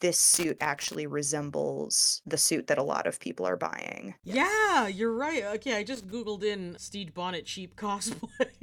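From 0.34 to 0.95 s, just before "resembles the suit that", a loose connector crackle breaks into the speech. A worn contact is making and breaking, chopping the signal into irregular scratchy bursts. It returns briefly from 5.95 to 6.12 s.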